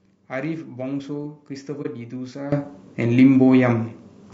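Low-delay AAC compression runs through the whole recording: the speech sounds rough and grainy, with noise filling the gaps between pitch harmonics and a thin, synthetic-sounding top band. This is likely AAC-ELD, whose short frames resolve harmonics poorly, and the damage fits a bitrate of about 32 kbps.

AAC frame loss with muting occurs from 1.82 to 1.87 s. The sound fades out and back in around a brief dip, which fits a single lost frame whose spectrum the decoder replaced with silence, the overlapping windows smoothing both edges.

A sudden gain jump at 2.52 s lifts the speech and its background noise together by about 14 dB in one step, and the louder level holds to the end. The likely cause is a digital gain change applied between adjacent samples without any ramp.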